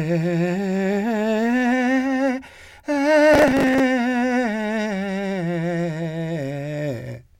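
From 3.34 to 3.80 s the music breaks into gritty crackle: processor overload crackle. Missed deadlines on roughly 5 ms buffers repeat stale audio, about 30 of them.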